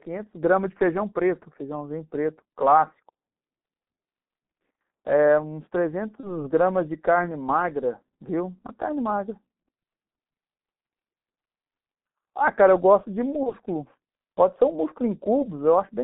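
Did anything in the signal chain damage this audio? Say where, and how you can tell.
Yes, at the codec and network stages. The speech sounds muffled and hoarse from start to finish, with consonants smeared. Nothing comes through above about 3.6 kHz or below about 200 Hz. That combination points to the G.723.1 codec, and the heavy damage fits its 6.3 kbit/s mode. Its 30 ms frames refresh the vocal-tract model slowly, so fast articulation blurs. Discarding everything above the telephone band takes away the sibilance and crispness.

Two brief glitches also come from the network. From 6.20 to 6.33 s and again from 13.43 to 13.53 s, the speech turns into a stretched sound that fades before normal speech resumes. This is VoIP packet loss concealed by the speech codec. Each gap fits a single lost 30 ms frame. The decoder repeated its last pitch and filter at falling gain, and because later frames build on that guessed state, the distortion lasts about 0.1 s, well past the missing packet.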